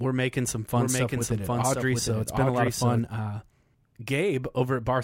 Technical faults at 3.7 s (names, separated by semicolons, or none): none